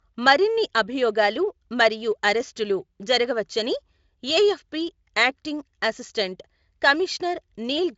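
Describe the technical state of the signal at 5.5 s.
At 5.5 s the speech is intact, with no dropout, distortion or other fault, and the Speex coding there at its high 34 kbps setting leaves at most faint coding damage, with content reaching up to about 7.7 kHz.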